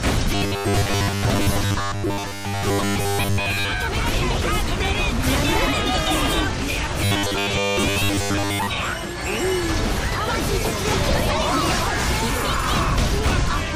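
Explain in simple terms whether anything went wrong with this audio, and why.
From 0.35 to 3.72 s and again from 7.04 to 8.67 s, the sound turns into a rigid, metallic 100 Hz buzz. This is robotic sound from repeated short buffers. Audio likely arrived too slowly, so tiny 10 ms pieces were replayed most of the time.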